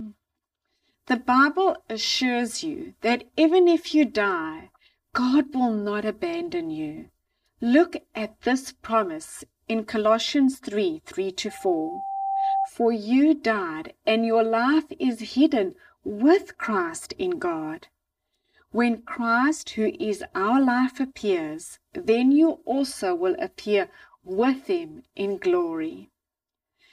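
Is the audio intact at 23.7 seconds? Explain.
No. At 23.7 s the speech carries channel delay (comb filtering), present throughout the clip. One channel lags the other by about 3 ms, and summing to mono cancels evenly spaced frequencies, starting around 150 Hz, leaving a hollow, phasey sound.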